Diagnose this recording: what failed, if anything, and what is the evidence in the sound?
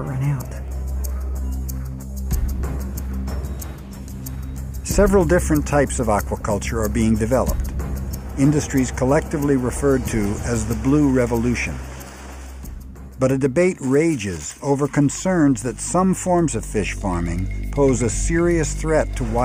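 Nothing in the signal chain has failed: no stage, from analogue wiring through conversion, buffering, processing, transmission or storage to playback, leaves any audible trace of a fault in this recording.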